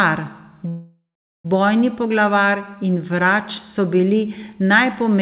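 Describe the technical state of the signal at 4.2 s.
At 4.2 s the signal is intact, with the speech carried cleanly through the call path and band-limited at about 4 kHz, as a narrowband telephone-style codec would leave it.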